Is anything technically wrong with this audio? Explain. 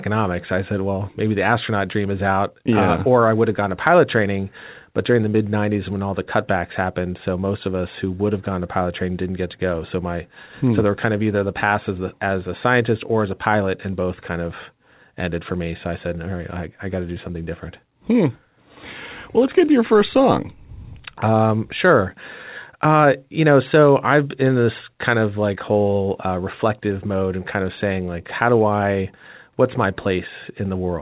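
No, nothing's wrong here; it's speech carried over a call path using G.711 mu-law at 64 kbps, so there's nothing above 4 kHz, which is simply what that codec does.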